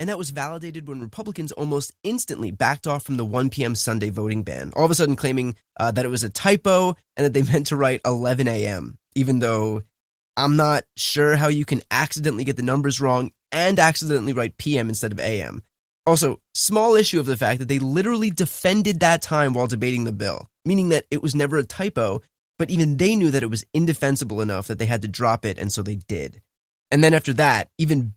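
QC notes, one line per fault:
1.02 s, 2.34 s, 3.36 s: microphone volume stepped up. The call software judged the microphone too quiet and raised its input volume in single steps, by about 6 dB after "that was validated when", about 3 dB before "backed off from the", then about 2 dB just after it. Speech and background jump louder together each time.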